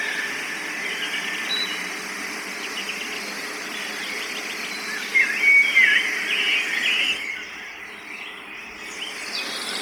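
From start to finish, the everyday sound carries heavy Bluetooth LC3 compression, likely from an LE Audio link. The encoder discards much of the upper spectrum and refills it with synthetic noise, giving a grainy, breathy edge to the treble, consistent with a bitrate around 32 kbps and 10 ms frames. On a spectrogram the high band appears speckled and smeared rather than detailed, with nothing above 20.1 kHz.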